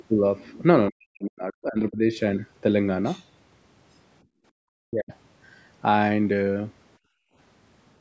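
From 0.9 to 2.17 s and again from 4.84 to 5.12 s, the speech itself sinks by as much as about 40 dB, likely speech suppressed in double talk: the echo canceller mistook the talker for loudspeaker echo while both sides spoke. Unlike simple gating, the voice itself fades or thins.

At 4.23 to 4.56 s and 6.99 to 7.35 s, the background is gated by the echo canceller, dropping about 26 and 29 dB for a few tenths of a second while the far end plays. These are brief room-sound holes, not damage to the voice.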